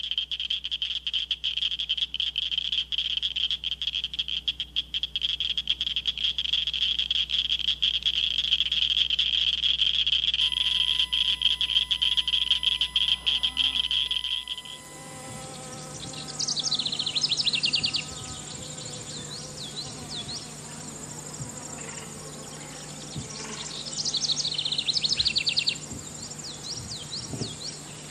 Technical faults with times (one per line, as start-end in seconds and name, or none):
10.40-15.41 USB whine